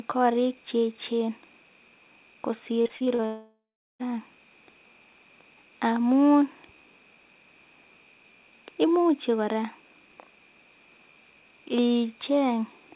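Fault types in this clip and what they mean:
Repeated packet loss (robotic sound): From 2.82 to 3.22 s the audio keeps breaking up. There are five short holes, none longer than about 38 ms, and each is papered over by stretching the last bit of sound before the next one hits. About a third of that span is filler, so it comes out choppy. The band stops at 4 kHz throughout, which fits a G.711-style narrowband call path.
Long network dropout: Right after the choppy patch, from about 3.26 to 4.01 s, roughly three quarters of a second of audio simply isn't there. First you hear the last sound dragged out as a fading buzz, then about 0.37 s of near silence, and then the audio resumes further along with the missing piece gone. That pattern is most likely a network stall where nothing arrived for that whole stretch.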